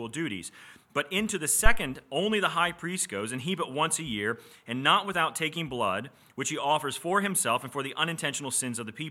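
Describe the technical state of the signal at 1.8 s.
At 1.8 s the signal is at the tail of a phantom power thump running from 1.66 to 1.82 s. A supply was switched on or off on a live input, and that sudden DC step pushed through the coupling capacitors into the signal path. The result is a deep, low thud peaking at about -8 dBFS, which dies away with a decay of about 37 ms, so by 1.8 s it is fading out.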